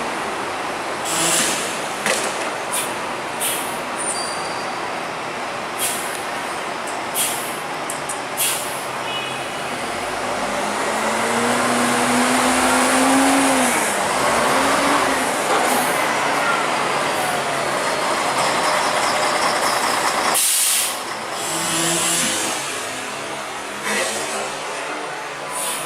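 No technical faults are audible.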